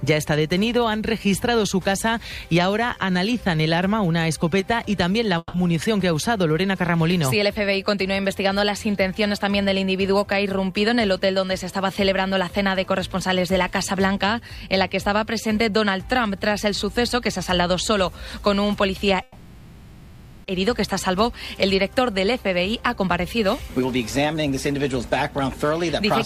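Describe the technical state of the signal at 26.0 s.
A jitter buffer speed-up from 25.41 to 26.08 s trims about 50 ms of backlog, so the sound runs roughly 107% fast, hurried but unchanged in pitch.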